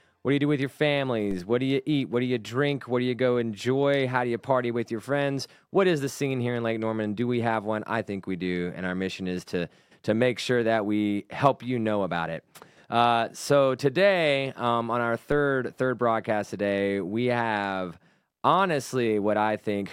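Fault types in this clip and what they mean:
DC step: the waveform's zero line jumps by about -27 dBFS at 1.31 s and 15.32 s, each a low thump decaying through a 5 Hz high-pass.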